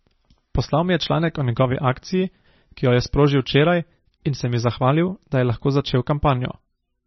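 MP3 compression damages this speech throughout: nothing above 5.9 kHz, watery swirling and smeared consonants, likely from a very low bitrate near 25 kbps.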